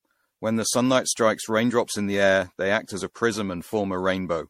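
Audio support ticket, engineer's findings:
Generation loss across the whole speech clip: swirly, smeared, hollow texture, blurred consonant attacks, nothing above 16.5 kHz. Likely repeated MP3 re-encoding at 64 kbit/s, around ten passes, each requantising on a shifted frame grid so noise and spectral holes pile up.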